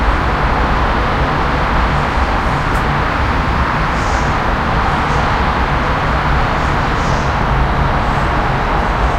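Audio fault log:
7.10–9.18 s, drift correction step: from 7.10 s to the end of the clip, playback runs about 6.5% slow, and speed and pitch drop together by about 116 cents, slightly more than a semitone. The sound is suddenly detuned downward and slowed. This is likely a clock-matching stage that lowered the playback rate in one step to keep its buffer from running dry. Because pitch is tied to rate here, the whole sound slides flat at once.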